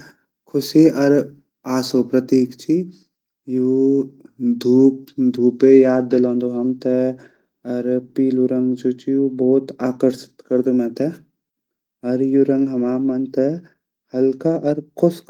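No technical faults can be heard in this speech recording, which keeps the full-band, lightly coded character of Opus voice compression in its hybrid mode the whole way through.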